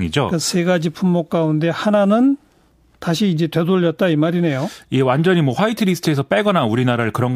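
Nothing stood out as a technical fault on listening to this speech recording.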